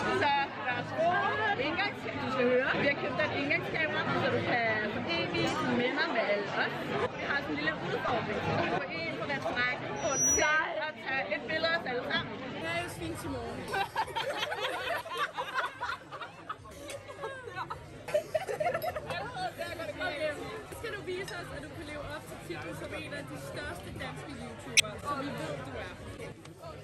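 At 8.05 to 8.11 s a corrupt frame decoded event produces a brief chirpy burst lasting about 56 ms. Several consecutive compressed frames arrived with flipped bits, and the decoder played them anyway, so misread gains and spectral codes put energy in the wrong frequency bands for that stretch. The error peaks at around -20 dBFS.

From 9.96 to 10.60 s a loudspeaker feedback squeal appears as a single tone at 5.8 kHz. The microphone is picking up the loudspeaker it feeds, and at that frequency the loop gain exceeds one, so the tone reinforces itself on each pass. It swells over roughly a third of a second and reaches something like 10 dB above the programme level before it stops.

A second corrupt frame decoded event occurs at 24.75 to 24.80 s, about 55 ms long. Only a couple of frames are damaged, but the misdecoded energy is louder, peaking near -10 dBFS, so it is heard as a louder blip than the first.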